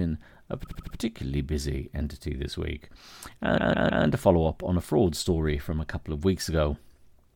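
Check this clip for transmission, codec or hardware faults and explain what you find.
Two bursts of repeated frames stutter the speech. From 0.64 to 0.96 s a 78 ms block, which fits about three compressed frames, plays four extra times, adding 0.31 s. From 3.57 to 4.04 s a 157 ms block repeats three extra times, adding 0.47 s. Each resend makes the decoder replay the same audio.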